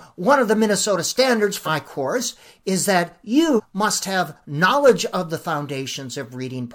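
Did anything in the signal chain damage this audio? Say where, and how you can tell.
Yes, at the codec stage: compressed frames skipped at 1.65–1.68 s and 3.55–3.60 s. The speech jumps ahead about 150 ms and 400 ms, roughly three and seven 46.4 ms frames.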